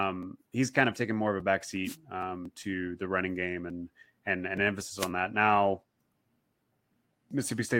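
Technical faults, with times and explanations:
1.84–1.97 s and 4.97–5.10 s, wireless microphone noise hit: two brief static swishes as the FM radio link fades and receiver noise rises over the speech.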